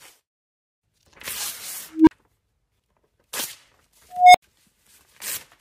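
Unstable filter at 1.91 to 2.11 s and again at 4.10 to 4.42 s. A recursive filter fed bad coefficients feeds its output back with gain above unity, so a tone near 300 Hz, then near 700 Hz the second time, swells over about 0.16 s and 0.24 s into a loud clipped squeal. The arithmetic then overflows and the sound drops out for 40 ms and 80 ms respectively until the filter resets.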